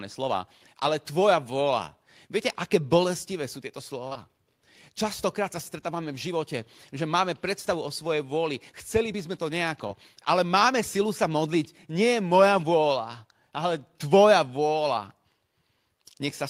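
Short concealed packet loss hits twice: at 4.07 s after "aké bolestivé sú tieto", and at 9.87 s after "chceli by sme to". The decoder papered over 40 ms and 20 ms gaps, leaving brief smears.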